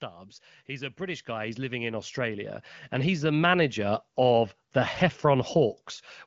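From 0.66 s to 4.1 s the speech and the background noise around it swell together, climbing steadily by about 14 dB until the level settles just before "of the". This is automatic gain rising: the gain control judged the input too quiet and raised its gain gradually over several seconds, lifting everything in the signal at once. The band-limited sound, with nothing above about 7.6 kHz, points to the AMR wideband (HD Voice) codec at a mid-to-high rate.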